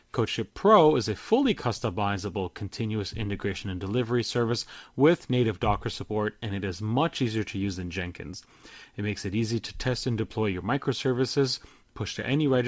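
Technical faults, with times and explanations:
Nothing to flag here: the speech comes through an ordinary call link whose G.722 coding leaves nothing above 8 kHz, which is just how that path normally sounds.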